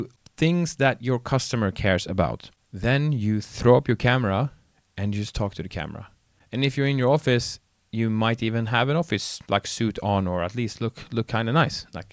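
No technical faults can be heard anywhere in the speech recording. Nothing in how it was captured, processed or delivered stands out as going wrong at any point.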